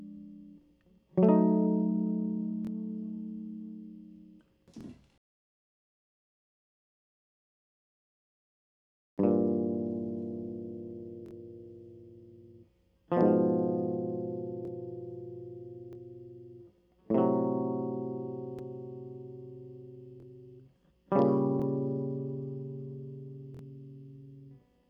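Music with brief stuttering hiccups at 2.65, 4.81, 11.26, 14.65, 15.93, 20.20, 21.60 and 23.55 s, the ones at 11.26 and 23.55 s doubled. These are repeated buffers: late audio made the player replay the last 23 ms chunk, which fits a 1024-sample buffer.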